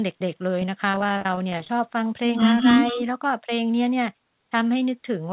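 Speech carried over a narrowband call link, with nothing above 4 kHz as expected of a G.711 mu-law path. From 0.9 to 1.70 s packets went missing again and again, and the receiver kept patching each hole by stretching out the preceding sound. The result is a choppy, robotic stretch of repeated packet loss, with a rapid string of short dropouts, the longest about 39 ms, and roughly two fifths of that span made up of concealment rather than real audio. At 2.56 to 2.69 s and again at 2.86 to 3.02 s, the loudspeaker side's echo canceller likely failed to remove all of its loudspeaker pickup. This echo leak returns a faint copy of the talker delayed by 193 ms and sitting around 20 dB below the direct speech, heard as brief ghostly scraps trailing the voice. Inside the second echo burst, from 2.93 to 2.99 s, the canceller likely could not tell the local talker from the returning echo during double talk and turned everything down. 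That speech suppression in double talk shows as a quick dip of a few decibels lasting roughly 70 ms.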